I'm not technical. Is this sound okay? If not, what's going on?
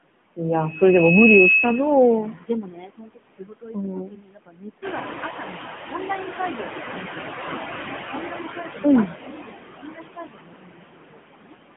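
No. Four things go wrong in how this speech was carried.

First, AMR narrowband mobile codec: the call passed through the older mobile-phone speech system, which keeps only a narrow slice of the sound, roughly 150 Hz to 3.4 kHz, and rebuilds the voice from a rough model. That makes it sound muffled, buzzy and artificial from start to finish.

Second, noise suppressor artifacts: a filter that tries to remove steady background noise works throughout, turning parts of the sound down moment by moment. The background sinks between words and rises again under them.

Third, speech cut by the noise suppressor: that same filter mistakes parts of the speech for background noise and turns them down too. From 2.32 to 5.09 s, 6.25 to 7.59 s, 8.11 to 8.85 s, 9.07 to 9.57 s and 9.8 to 11.55 s, quieter sounds and word endings come out swallowed or faint.

Fourth, noise suppressor catching up: around 5 s the room's background noise gets noticeably louder, which is just the room itself. 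The filter is slow to react, so from 4.81 to 5.7 s that noise pushes through more strongly, then fades back down over about 0.9 s.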